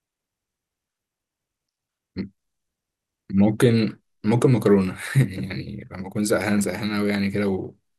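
No technical faults can be heard anywhere in the recording; the signal stays steady and intact throughout.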